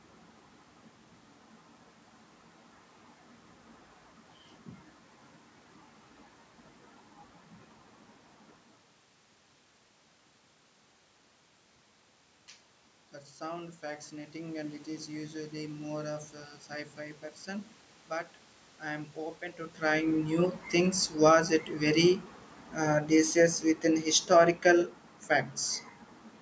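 Between 13.37 and 14.84 s the speech and the room noise behind it swell together by about 6 dB, settling just before "is usually more of". This is automatic gain rising: the gain control judged the input too quiet and gradually raised its gain.

After "it very", from 22.77 to 25.01 s, the voice and its background sink together by about 4 dB. This is automatic gain falling, where the control judged the level too loud and eased its gain down over those two seconds.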